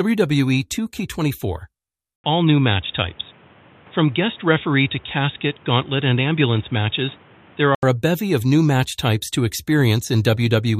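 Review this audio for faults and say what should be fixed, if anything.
From 2.16 s to 7.83 s the sound turns dull and boxy, with nothing above 3.8 kHz and new background noise around 30 dB down, after an 80 ms gap. The likely cause is an input switched to a poorer device. A spectrogram shows the upper band blank there, and the waveform shows a flat gap at 2.16 s with no level change. Lock recording to one input device so the system cannot switch mid-take.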